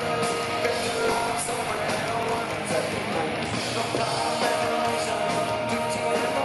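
From 0.79 to 2.39 s a steady buzz near 45.9 Hz sits on the sound, which runs 1.07 times fast at unchanged timbre. This is a block size mismatch (truncated). Blocks, which fits 1024 samples written each, lose their ends before the next stage reads them.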